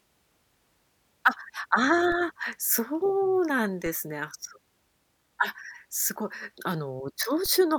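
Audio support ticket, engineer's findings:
DC step at 2.12, 3.86 and 7.46 s: low thumps, offset about -27 to -29 dBFS, decaying through a 20 Hz high-pass. Speech continues intact, unlike a dropout.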